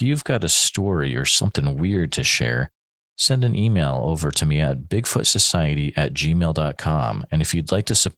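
From start to finish the speech carries Opus voice compression damage that is plainly audible. The sound points to a low bitrate of roughly 16 kbps in hybrid mode, with SILK's linear-prediction coder handling the band up to 8 kHz and a CELT layer covering the range above. The band stays full width, but the excitation is coded coarsely, which gives the voice a hoarse, slightly robotic texture.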